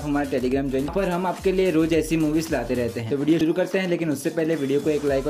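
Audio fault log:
0.88 s and 3.41 s, damaged data in a compressed stream: corrupt bytes in the coded stream make the decoder misread the frame at each point, lose sync and hunt for the next frame header, leaving a brief chirp or blip only a few milliseconds long.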